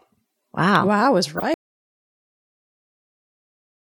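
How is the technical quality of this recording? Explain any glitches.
The recording has two clear faults, both close together, and the second takes out the rest of the clip.

Just after "I was", from 1.35 to 1.43 s, a short, harsh burst cuts across the speech, a squeaky, noisy blip that jumps out at around -10 dBFS. It is a corrupt frame decoded. Bits inside a few compressed frames were damaged, and the decoder played them anyway. Misread gains and codes put energy at the wrong frequencies for the length of those frames, which is why the blip lasts under a tenth of a second.

About a tenth of a second later, at 1.54 s, the sound stops dead and stays that way to the end of the clip. The gap is silent, with no room tone underneath, so nothing of what followed survives. This is an audio dropout to silence, likely caused by the input being lost, through a disconnected device, a broken link or an accidental mute, while the recorder kept writing silence.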